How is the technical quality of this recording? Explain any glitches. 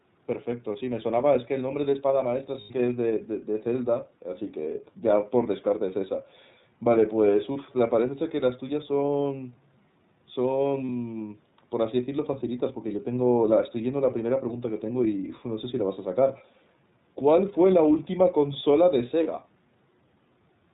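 The recording is intelligible but plainly coded through the iLBC codec, with five short dropouts.

The iLBC codec shapes the whole 21 seconds of speech. The sound is narrowband, with nothing above 4 kHz, and carries a slightly rough, synthetic edge. Each block of speech is coded on its own rather than predicted from the one before, and the roughness fits the 13.33 kbps mode with 30 ms frames. That frame-by-frame texture, not a smeared, watery sound, sets it apart from low-bitrate transform codecs.

Lost iLBC frames occur at 2.61 s, 7.52 s, 9.06 s, 10.87 s and 19.23 s. The first lasts about 90 ms, which fits three consecutive lost frames. The others are about 30 ms each, consistent with single frames. In each gap the decoder repeats the last pitch cycle blended with noise, so the listener hears a brief held, buzzy or breathy vowel rather than silence. Clean speech returns almost immediately afterwards because each frame decodes independently. 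Codecs that depend on earlier frames stay distorted for a while after a loss.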